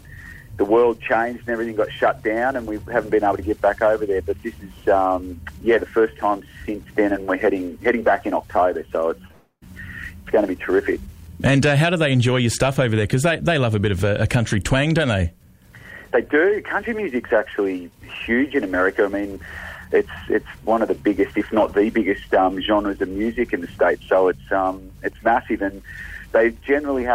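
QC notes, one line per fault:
9.27–9.31 s, short concealed packet loss: about 20 ms of audio failed to arrive in time, and the receiver patched roughly 17 ms of it by extending the last sound, following its pitch where it was tonal and using shaped noise where it was not. The gap is too short to register as a dropout. It comes across as a quick smear or slight wobble, and any very brief sound in that slot could be swallowed.
9.31–9.64 s, long network dropout: right after the short gap, about 300 ms of audio goes missing. The receiver stretches the final sound into a buzzy, hissing continuation that fades, and the last roughly 90 ms is silence before the real signal returns. The cause is likely a stall in the network path rather than a local glitch. Because that stretch was never delivered, the audio resumes further along with that portion simply gone.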